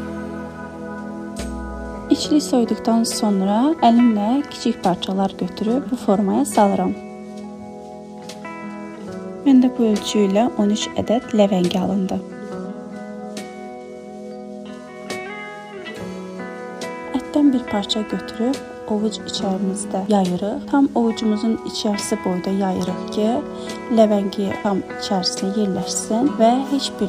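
No technical faults are audible anywhere in the recording.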